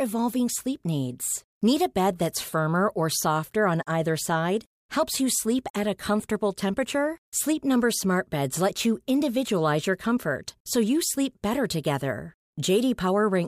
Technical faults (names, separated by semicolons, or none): none